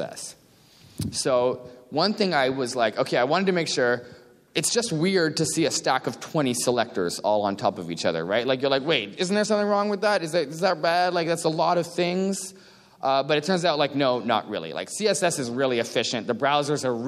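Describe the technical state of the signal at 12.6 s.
Around 12.6 s the signal is intact, with no dropout, distortion, clicks or other technical fault audible at that moment.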